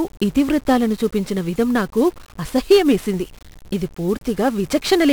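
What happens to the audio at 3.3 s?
At 3.3 s the speech carries 1-bit DFPWM compression, as it does across the whole clip. Each sample is one bit that nudges an adaptive level up or down. The heavy quantisation noise makes the speech fuzzy and crackly, and hiss swamps the treble.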